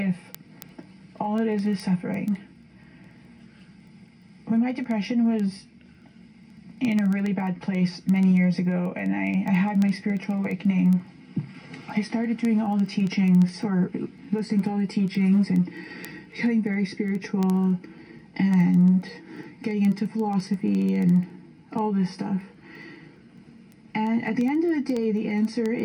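From 0.14 s to 25.8 s, word clock ticks recur roughly every 70 ms: a receiver clock off by a few hundred ppm slips one sample each time. The steady rate sets it apart from random clicks.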